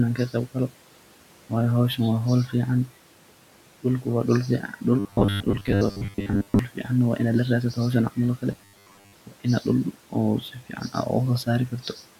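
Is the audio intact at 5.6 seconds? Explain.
No. Robotic sound from repeated short buffers runs from 4.99 to 6.59 s, likely from roughly 10 ms chunks replayed for most of that span. This imposes a rigid 100 Hz metallic buzz, visible as identical repeating waveform cycles and evenly spaced 100 Hz harmonic stripes on a spectrogram.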